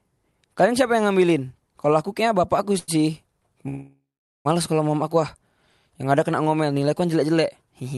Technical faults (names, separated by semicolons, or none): short stall from a late packet; call audio freeze